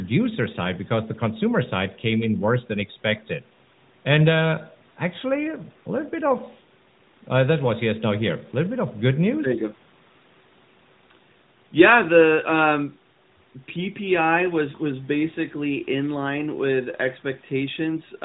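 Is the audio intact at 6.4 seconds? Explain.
Yes, at 6.4 seconds the speech comes through intact, with no dropout, glitch or other fault at that moment.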